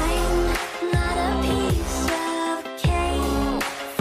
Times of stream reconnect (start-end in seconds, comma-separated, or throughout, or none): none